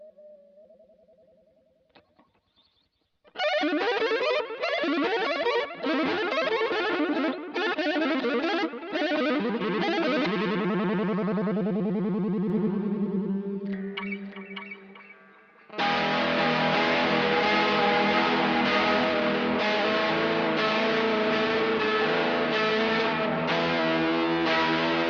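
A doubled audio track runs from 12.50 to 19.04 s. A second full-band copy trails the sound by roughly 0.7 s and sits a few decibels quieter, likely from the signal being captured twice. It starts and stops abruptly, with no decay or room colour.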